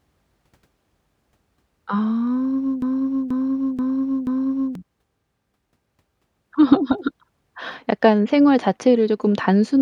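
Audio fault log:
2.82–4.75 s broken-record loop. A 0.48 s fragment of the speech plays four times back to back, identical on each pass. The player or stream likely stalled and kept resending its last held piece. The speech meant for that span is lost.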